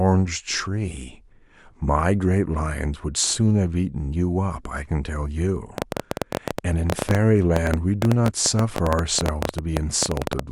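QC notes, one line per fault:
5.78–10.40 s, train of clicks: a repeating pulse, likely from nearby equipment interference or a faulty connection, injects about 11.3 clicks per second at an irregular pace, roughly fifty in all, peaking some 15 dB above the speech, heard as uneven ticking over speech and pauses alike.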